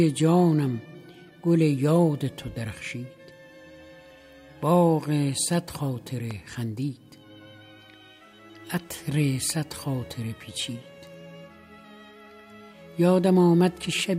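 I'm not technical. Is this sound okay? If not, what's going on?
No. There is one loud pop, from 6.31 to 6.33 seconds. It is a single sharp click, over in a moment. It sounds a little louder than the audio around it, and the sound carries on underneath without a break. A pop like this comes from a sudden jolt of electricity entering the signal. Here it is likely from a cable being plugged in, a switch being flicked, or a burst of static.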